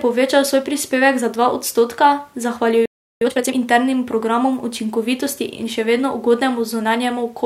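At 2.86 s the speech just drops out for about 355 ms, back at 3.21 s. That's a playback stall: the player most likely ran dry of buffered data or had its thread held up, so the output sat silent until it recovered.

Right after, from 3.21 to 3.55 s, you get time-compressed catch-up. The player trims its backlog by slicing out short chunks and cross-fading the rest, so the speech runs at double speed with normal pitch, settling just before "internim programom".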